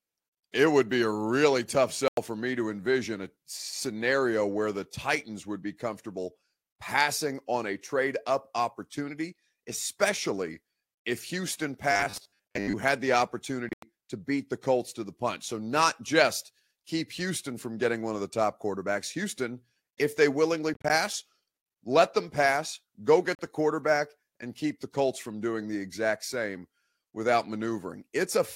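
A Bluetooth dropout at 2.08 to 2.18 s, after "be a really tough", cuts about 93 ms to silence, likely from packets lost on the wireless link. Speech resumes as if it had played on, so the gap is a hole and not a stutter. From 11.92 to 12.75 s, robotic sound from repeated short buffers turns the speech into a rigid 100 Hz buzz. A 100 Hz buzz fits a 10 ms buffer being likely replayed while real audio is skipped. Unlike a dropout, the buzz fills the gap instead of leaving silence. Further dropouts follow at 13.69 to 13.83 s, scattered gaps over about 133 ms; 20.74 to 20.90 s, after "if they willingly", gaps scattered over 160 ms; and 23.35 to 23.39 s, 40 ms between "let them pass go" and "the quarterback and keep". Each is likely packet loss again.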